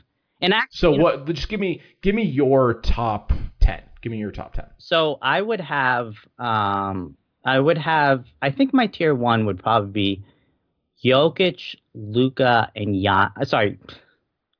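Listening through the speech recording, nothing stood out as a technical problem at any point.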